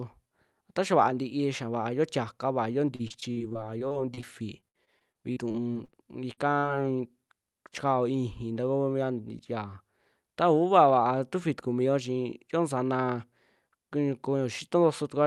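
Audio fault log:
2.95–4.24 s and 4.60–5.95 s, repeated packet loss (robotic sound): Packets kept going missing, 12 gaps in each stretch, the longest 42 ms and 59 ms. The receiver patched each hole by extending the previous sound, so roughly a fifth of each span is synthetic and choppy, with pieces missing.
6.33–6.39 s and 6.59–6.65 s, short concealed packet loss: Two brief dropouts, about 40 ms each, never reached the decoder in time. Each was filled by continuing the preceding sound and then blended back into the real audio, leaving a short smear or wobble.
8.94–9.59 s, jitter buffer speed-up: The jitter buffer had built up extra delay, so the receiver repeatedly cut out pitch-period-sized slices, about 50 ms in total. Playback runs at about 106% speed with pitch unchanged, making this stretch of speech sound slightly hurried.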